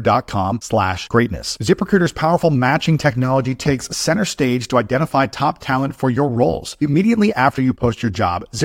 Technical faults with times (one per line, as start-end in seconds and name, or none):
none